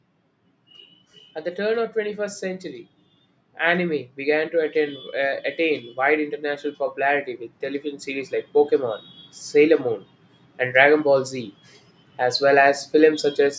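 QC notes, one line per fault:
3.59–9.04 s: automatic gain rising. Voice and background noise swell together by about 8 dB over five and a half seconds, unlike a sudden level step.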